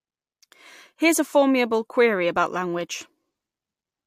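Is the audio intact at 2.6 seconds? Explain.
Yes, at 2.6 seconds the speech runs intact, with no dropout, click, distortion or other fault.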